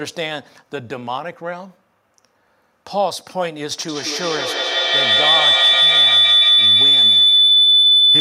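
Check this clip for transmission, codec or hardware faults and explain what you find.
One fault is present: a feedback howl starting at 3.88 s and continuing to the end of the clip. The loudspeaker output is being picked up again by a microphone in the same room, and each pass around that acoustic loop comes back louder than the last. The repeats narrow onto the frequency the loop favours, so a tone near 4 kHz builds up, with the loop repeating roughly every 150 ms, and peaks at about 10 dB above the speech.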